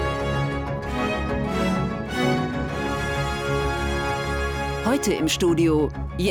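No technical faults can be heard anywhere in this clip. Nothing in the audio stands out as needing a timestamp or a closer look.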